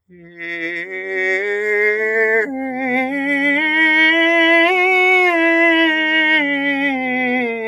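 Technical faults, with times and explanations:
0.08–0.43 s, sound cut by the noise suppressor: right at the opening, the music sinks by about 16 dB at its deepest, with sustained material and decaying tails shrinking while sharper attacks still poke through. The noise suppressor mistook this steady, fading content for background noise and pulled its gain down harder than the surrounding signal, so the held and ringing parts lose level and body for that short stretch.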